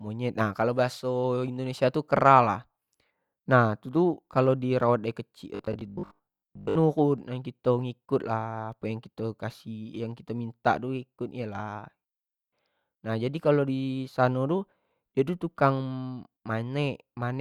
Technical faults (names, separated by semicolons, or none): robotic sound from repeated short buffers